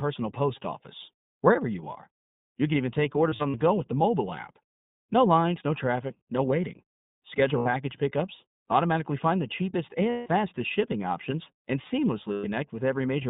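The speech passes through the iLBC codec, which points to its 15.2 kbps mode with 20 ms frames. The line band is about 150 Hz to 3.7 kHz, so the audio sounds thin and narrowband, with a plainly audible rough, synthetic edge.

Lost iLBC frames occur four times. Each time, packets went missing and the decoder covered the gap by repeating the last pitch cycle blended with noise, heard as a held, buzzy vowel. From 3.30 to 3.57 s, about 120 ms is lost in short bursts of up to roughly 40 ms each. The losses are 80 ms at 7.58 to 7.68 s, 160 ms at 10.10 to 10.28 s and 120 ms at 12.32 to 12.46 s. The voice returns almost at once after each gap.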